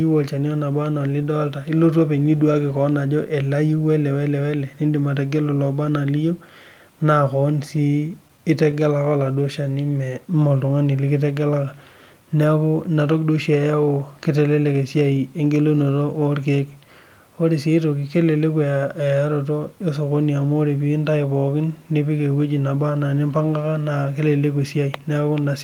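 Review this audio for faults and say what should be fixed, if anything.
Scattered short gaps run from 7.77 to 8.75 s. About five small holes, none longer than roughly 15 ms, were patched by carrying the last sound forward. Together they cover about 50 ms, around 7% of that stretch, and they leave brief ticks and smears in otherwise continuous speech. Unlike a single long dropout or a burst loss, each hiccup is tiny and isolated, and the stretch ends up only 16 ms longer. A steadier network path or forward error correction would prevent these losses.

A jitter buffer slow-down follows from 9.35 to 9.99 s. The receiver stretched the audio to rebuild its reserve, repeating single pitch periods so that this passage plays at 92% speed and gains 57 ms. The speech drags and sounds drawn out, but the pitch stays put, which separates it from a tape-style speed error where pitch drops along with tempo. 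It also differs from the scattered gaps because it is drawn out rather than ticky. A buffer target set high enough for the network's real jitter, or adapted more gradually, would prevent it.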